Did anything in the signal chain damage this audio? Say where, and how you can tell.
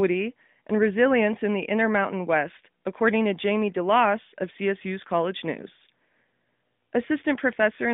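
No, nothing in the chain has damaged this speech recording. It comes through an AMR narrowband mobile codec path, with the audio confined to roughly 150 Hz to 3.6 kHz and only the light coloration expected of a mobile call at what sounds like the 12.2 kbps mode.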